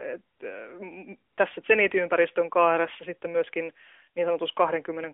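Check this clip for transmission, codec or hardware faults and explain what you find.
Two brief drops into comfort noise stand out. They are heard over a narrowband AMR-NB line whose 300 Hz to 3.5 kHz band and light coding texture fit the 12.2 kbps mode.

AMR comfort noise appears at 0.36 to 0.40 s and again at 1.32 to 1.38 s, just before "tässä zenitiympäristön kaaressa sitten". For 40 ms and then 60 ms, the sending phone judged the signal to be silence and stopped transmitting speech frames. The receiver filled each gap with synthetic noise built from a coarse estimate of level and spectral shape. The real background briefly gives way to a smooth, even hiss that switches in and out abruptly.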